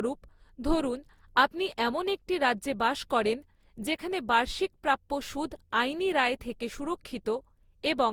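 Across the whole speech clip the audio has likely been through a lossy codec many times over, around seven successive encode and decode passes, with the character pointing to Opus at about 64 kbit/s. That is generation loss: each new pass quantises again on a shifted frame grid, so noise piles up. The result sounds swirly, smeared and hollow beyond what that bitrate alone would give, with softened consonant attacks, though content still reaches up to about 20.2 kHz.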